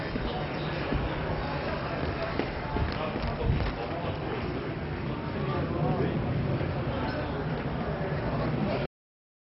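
From the start, the audio is dull and heavily damaged. Nothing is present above 5.6 kHz. The remaining content gurgles and sounds granular, and parts of the upper range seem to flicker in and out. This is likely MP2 compression at a very low bitrate. The codec splits the signal into sub-bands and rations bits among them. Starved of bits, it shuts off the top bands and quantises the rest coarsely. The damage fits a rate around 32 kbps.

At 8.86 s there is a cut-off end. The sound stops abruptly mid-event. There is no decay or fade. It drops straight to digital silence, which lasts to the end of the clip. The final stretch of audio was never written or played out. The last buffers went missing before output, so the sound is truncated rather than finished.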